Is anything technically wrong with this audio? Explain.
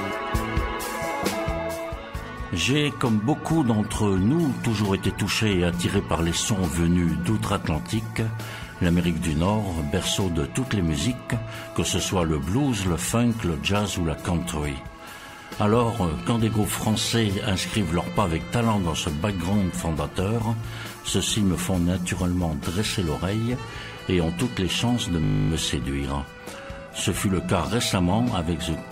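Yes. From 25.24 to 25.5 s the sound freezes into a steady 50 Hz buzz as one 20 ms fragment repeats 13 times. This is a system hang loop: the computer or driver stalled, and the audio hardware kept replaying the same short ring buffer.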